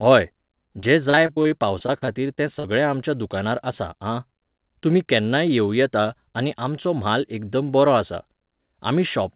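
From 0.8 to 2.66 s, just before "आमच्या दुकानार आसा आं", repeated packet loss gives choppy, robotic speech. Fourteen short holes, none longer than 41 ms and about 317 ms in total, are each patched by stretching the previous sound. Unlike a single dropout or steady codec noise, these patches recur in quick succession. Throughout the clip, nothing above 4 kHz is heard, which fits a narrowband call codec such as G.711.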